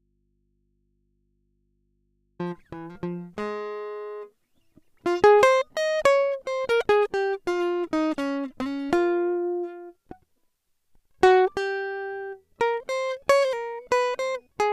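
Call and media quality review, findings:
Signal lost upstream while the input stayed live, likely a disconnected or failed source on an open line. Audio dropout to a faint residue, already under way at start, to 2.39 s: music absent, only mains hum roughly 45 dB down, then an abrupt return.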